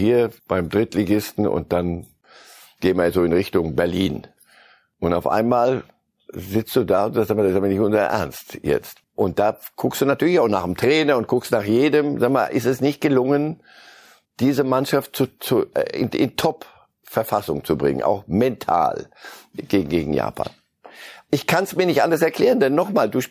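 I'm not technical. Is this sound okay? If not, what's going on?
Yes, no faults to hear.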